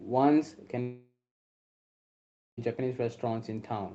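From 0.81 s to 2.59 s the speech breaks off. The last sound carries on as a fading buzz, then gives way to about 1.4 s of near-silence before the speech returns with that stretch missing. This is likely a long network dropout: no packets arrived, so the receiver stretched the last audio and then gave up. A brief packet loss would be patched almost seamlessly, and a hard mute would stop cleanly, with no decaying tail.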